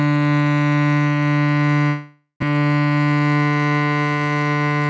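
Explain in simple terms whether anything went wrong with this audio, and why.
Two things went wrong in this music. From 1.88 to 2.44 s there is a long network dropout, likely from audio that never arrived. The last sound is stretched into a fading buzz or hiss and ends in a brief silence. Unlike a quick click or skip, it lasts over half a second, and the missing music never returns.

From 2.51 to 3.79 s comes a jitter buffer speed-up, as the receiver catches up on the delay the gap built. It trims tiny slices, about 150 ms in all, so the music runs roughly 10% faster and the tempo feels rushed. The pitch stays the same, which is what separates it from a sped-up tape.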